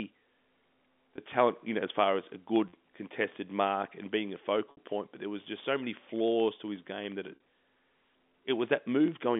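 Packet loss with pitch repetition occurs at 1.16 s (20 ms), 2.69–2.73 s (40 ms), 4.71–4.77 s (60 ms) and 7.35–7.40 s (50 ms). Each gap is filled by repeating the last pitch period, heard as a brief buzzy hold through the telephone-band speech; in the 60 ms loss the repetition fades into silence and the speech returns with a short cross-fade.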